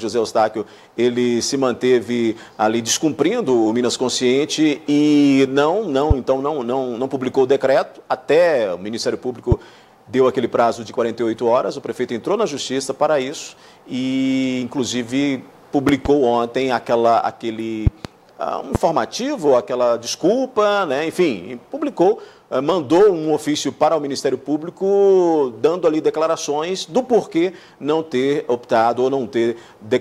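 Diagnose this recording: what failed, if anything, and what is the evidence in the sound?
Loud pops at 6.11–6.13, 9.52–9.54 and 18.75–18.78 s, and doubled at 15.89–16.08 and 17.87–18.07 s, peaking about 15 dB above the sound. Likely voltage steps in the analogue wiring. Unlike dropouts, the sound continues underneath.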